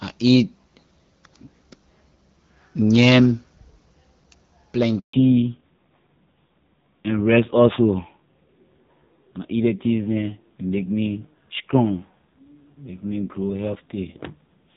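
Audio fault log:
4.99–5.13 s handover gap: the audio dies away over a few tens of milliseconds and leaves a 140 ms hole of silence before the signal returns. This is the pattern of a call being moved between networks, where no speech frames are delivered while the new link is set up. Whatever was said inside that window is gone rather than delayed, and the audio resumes once frames flow again on the new connection.
5.13–14.76 s fallback to narrowband: immediately after the gap, all content above 4 kHz disappears for the rest of the clip, and the speech turns duller and rougher. This points to the call dropping from the HD Voice wideband codec to an older narrowband one. The lower band limit removes sibilance and brightness. The added raspiness fits a low narrowband rate, around 5.9 kbit/s. Before 5 s, the wideband coding, consistent with about 12.65 kbit/s, shows only light codec damage.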